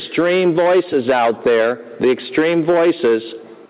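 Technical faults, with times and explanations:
Throughout, gain pumping: the gain swings by around 10 dB, pulled down under every loud sound, likely from excessive input gain with a fast limiter. The waveform looks flattened, its floor rising between peaks; the spectrogram's noise band, ending near 4 kHz, breathes.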